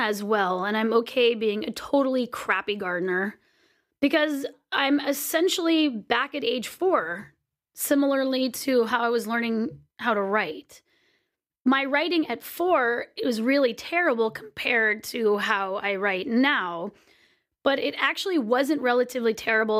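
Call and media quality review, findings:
Nothing wrong turned up on this one; the speech comes through fine with no faults to log.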